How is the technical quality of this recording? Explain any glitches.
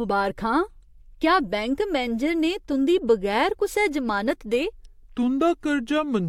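The recording has one clear fault: a section at the wrong speed in its final stretch.

From 4.79 s to 6.28 s, the speech drops into slow motion, playing at 0.786 times its recorded speed. Because speed and pitch are locked together here, the voice also falls by about four semitones, turning deep and drawn out. The likely cause is that this portion was rendered or played against a mismatched clock rate, so its samples were read out too slowly.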